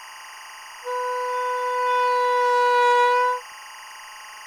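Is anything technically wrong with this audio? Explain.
Yes. Timecode bleed runs through the whole clip: linear timecode at 24 frames per second leaks from a neighbouring track or cable into the signal. Its square wave flips between tones near 1 kHz and 2 kHz, adding a steady chirping warble roughly 20 dB below the sound.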